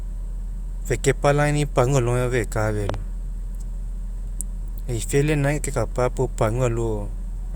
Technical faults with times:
2.89-2.96 loud pop

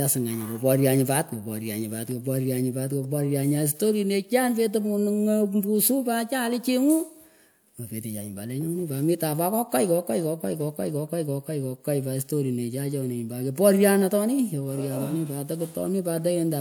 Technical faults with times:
none

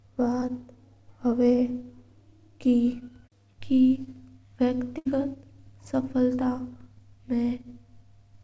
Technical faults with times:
4.98-5.07 burst of packet loss

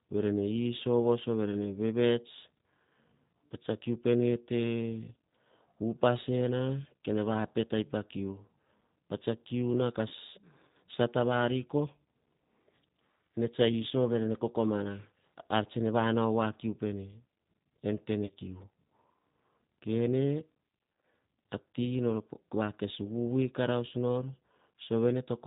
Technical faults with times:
0.00-25.47 G.729 codec
10.08-10.13 VoIP packet loss concealed by the speech codec
18.26-18.32 VoIP packet loss concealed by the speech codec

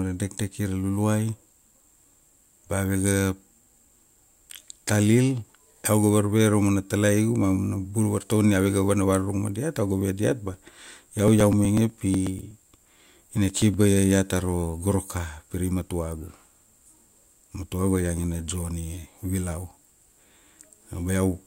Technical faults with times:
10.54-13.74 periodic USB or driver dropouts

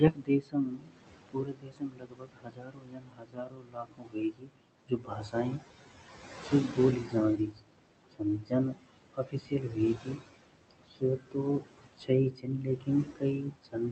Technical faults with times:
0.00-13.91 noise suppressor artifacts
0.00-13.91 speech cut by the noise suppressor

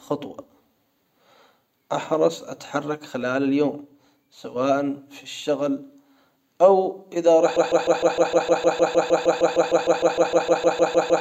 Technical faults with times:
7.56-11.20 broken-record loop

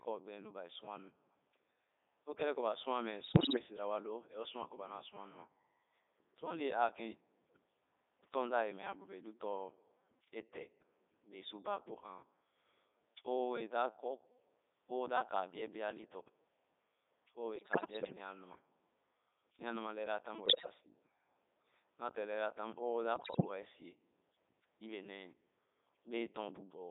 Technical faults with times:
0.00-26.91 Codec 2 vocoder
3.24-3.62 bit errors on digital voice radio
17.56-18.18 bit errors on digital voice radio
20.46-20.74 bit errors on digital voice radio
23.16-23.50 bit errors on digital voice radio

